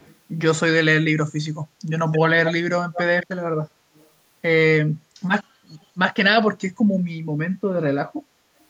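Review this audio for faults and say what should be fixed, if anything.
Echo leak: a far-end echo canceller likely let loudspeaker pickup through, so a delayed copy of the speech, about 255 ms late at 0.0–0.15 s and about 208 ms late at 2.12–2.19, 2.45–2.54, 2.93–3.02, 3.21–3.27, 3.95–4.08 and 5.81–5.85 s, surfaces in short scraps. It ranges from faint to nearly as loud as the speech, loudest around 2.5 s. Tuning or replacing the echo canceller, or having the far end use a headset, would prevent it.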